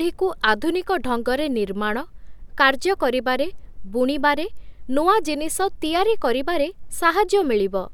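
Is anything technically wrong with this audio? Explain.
No, nothing is technically wrong with this audio.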